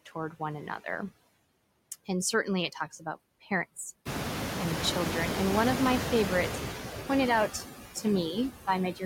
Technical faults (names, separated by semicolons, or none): noise suppressor artifacts